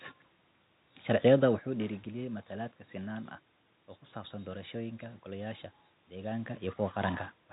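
The speech carries no technical faults; the room's background noise and the level changes around 1.5 s and 6.5 s, where the talker shifts relative to the microphone, belong to the recording, and the audio passes through telephone coding with nothing above about 3.8 kHz.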